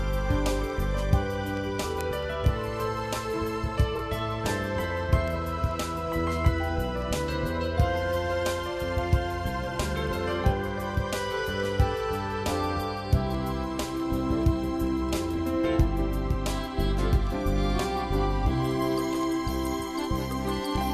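From 0.27 s to 20.76 s, word clock ticks run through the whole sound at about five per second, about a hundred in all. The receiving device is running on its own clock rather than locking to the sender's, and the two drift apart by around a hundred parts per million. Each time they slip a full sample, one sample is dropped or repeated and its neighbours are misread, giving a sharp tick whose strength varies from one to the next. On a spectrogram these show as thin vertical lines spanning the full frequency range at evenly spaced intervals. On the waveform each is a single-sample step or spike.

Between 3.95 s and 4.01 s, frames out of order produce a brief garbled flutter. Two neighbouring blocks, each about 21.3 ms long, were decoded in swapped order. That short stretch plays with its halves exchanged. No time is lost. The waveform shows abrupt discontinuities at the block boundaries, and the spectrogram shows a short, disordered patch with vertical edges at each join.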